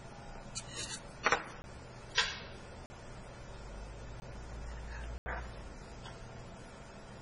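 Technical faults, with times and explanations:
Throughout: MP3 compression. Heavy damage, likely from a very low bitrate near 24 kbps. Nothing above 10.4 kHz survives, and weak detail swirls and chirps between frames.
1.62–1.64, 2.86–2.90, 4.20–4.22 and 5.18–5.26 s: block of digital silence. The sound cuts out and returns abruptly, with no fade. The 20, 40 and 80 ms holes leave audible gaps.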